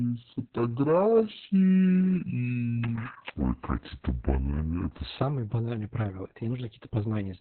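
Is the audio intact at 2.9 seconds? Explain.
No. At 2.9 s you're in the middle of a section at the wrong speed, running from the start to 5.19 s, just before "банальные правила". It plays at about 0.61 times normal speed, likely from being fitted to the wrong clock, so the speech drags and sits roughly ten semitones lower.

On top of that, Opus voice compression runs through the whole clip, including this moment. Nothing comes through above 4.2 kHz, which points to the narrowband SILK mode at a very low bitrate, around 6 kbps. The excitation is coded coarsely, so the speech sounds muffled, hoarse and a bit robotic.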